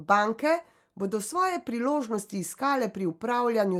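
No technical faults are audible.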